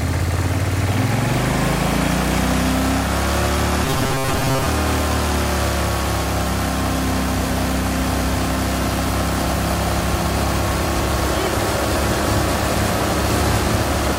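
From 3.85 to 4.66 s the sound turns into a rigid, metallic buzz fixed at 134 Hz, robotic sound from repeated short buffers. New audio likely arrived too seldom, so roughly half this stretch was filled by looping a slice of about 7.5 ms.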